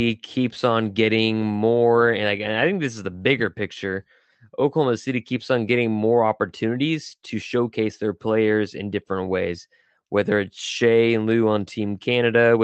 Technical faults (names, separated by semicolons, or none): none